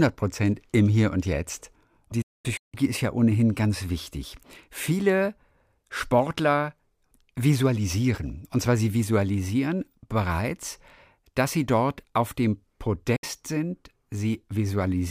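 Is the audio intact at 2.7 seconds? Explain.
No. A digital broadcast dropout runs from 2.22 to 2.74 s, so 2.7 s falls right at its end. The receiver stopped getting usable frames and muted until clean data returned. The speech fades out over about 8 ms and then breaks into several holes across roughly half a second, with about 384 ms missing in total and the longest gap 224 ms. Speech resumes with "ist ja ohnehin ganz", and whatever was broadcast during those gaps is gone.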